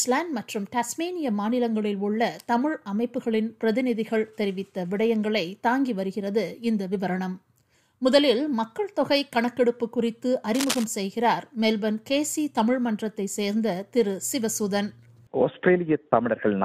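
From 10.55 to 10.84 s, a burst of cable scratch noise rustles over the sound at nearly the signal's own level, likely from a worn lead or connector being moved. Its dense, uneven texture sets it apart from sparse, isolated digital clicks.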